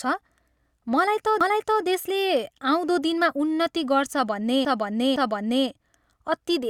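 At 1.41 to 1.83 s the speech stutters as a 0.43 s stretch plays twice. Just after "गर्छ भन्ने", from 4.65 to 5.67 s, a 0.51 s block sounds three times. These are repeated frames: runs of compressed audio were duplicated, so the decoder replayed them, lengthening the clip by 0.43 s and 1.02 s.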